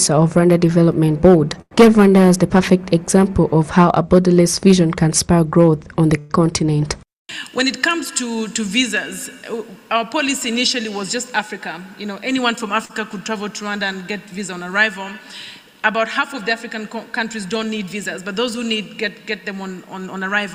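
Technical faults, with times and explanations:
1.61–1.73 s, short stall from a late packet: a sound is held about 96 ms, with a slight buzz or dip, until the packet arrives. Nothing is lost, unlike concealed loss.
6.19–6.32 s, call audio freeze: the sound stretches into a fading buzz or hiss for about 109 ms without reaching silence, then resumes where it stopped, likely from packets held up in transit.
12.85–12.91 s, short concealed packet loss: about 60 ms of audio is gone and only 41 ms is filled with a continued sound, so it smears briefly and skips slightly ahead.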